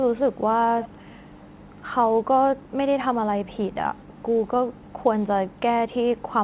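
Speech, with an echo leak from 0.81 to 1.18 s. A faint delayed copy of the voice, roughly 20 dB down, trails about 256 ms behind. This is likely a far-end echo canceller failing to remove loudspeaker pickup. The sound stops near 4 kHz, which fits a narrowband telephone codec.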